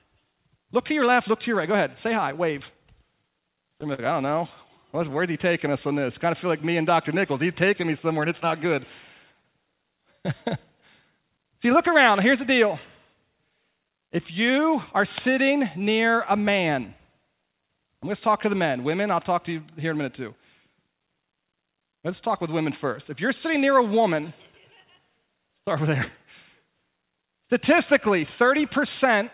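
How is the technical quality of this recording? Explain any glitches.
The recording has four kinds of network-timing glitches, all in the first two-thirds of the clip. It is narrowband throughout, with nothing above 4 kHz, which points to a telephone-grade call codec such as G.711 mu-law at 64 kbps.

Repeated stalls (stutter), 3.22 to 4.00 s: packets arrived late, so the jitter buffer ran dry five times. The receiver stretched the last sound to cover about 83 ms, about 11% of that stretch, with the longest hold at 44 ms. Nothing is lost, but the speech catches and drags in little jerks. On a waveform, short stretches repeat the same cycle shape. On a spectrogram, the harmonics freeze into flat horizontal bands, and the longer holds fade.

Scattered short gaps, 4.64 to 5.63 s: about five isolated packets went missing or came too late. Each hole was a few milliseconds long, roughly 30 ms in all, and was patched by continuing the preceding sound. 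The result is brief ticks or smears rather than dropouts. A spectrogram shows tiny vertical seams or short smudged columns where the harmonic pattern briefly stops evolving. A waveform shows small discontinuities at the joins.

Jitter buffer slow-down, 4.98 to 6.00 s and 14.98 to 16.12 s: the buffer was low or had just raised its target delay, so the receiver repeated single pitch periods again and again to rebuild a reserve. This added 60 ms and then 65 ms, and playback ran at 95% speed with pitch unchanged. Syllables sound slightly drawn out. On a spectrogram, the features are stretched in time but sit at the same frequencies. A waveform shows repeated identical periods.

Jitter buffer speed-up, 18.28 to 19.01 s: the buffer held more than its target, so the receiver cut out short pitch-period pieces, around 50 ms in total. Playback runs at 106% with the same pitch, and the speech sounds a little hurried. 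On a spectrogram, the formant movements are compressed in time, with harmonics at unchanged heights. A waveform shows slightly abrupt period-to-period joins where pieces were dropped.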